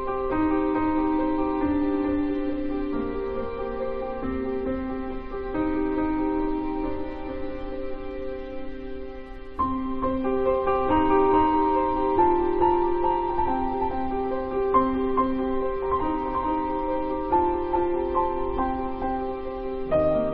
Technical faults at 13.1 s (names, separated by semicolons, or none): doubled audio track